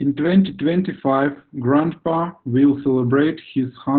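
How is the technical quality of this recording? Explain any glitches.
Technical quality is poor: heavy Opus voice compression runs through the whole clip. Narrowband SILK coding at a very low rate, fitting about 8 kbps, leaves nothing above 4.4 kHz and codes the excitation coarsely, so the speech sounds muffled, hoarse and slightly robotic. A spectrogram shows a flat ceiling at 4.4 kHz with empty space above.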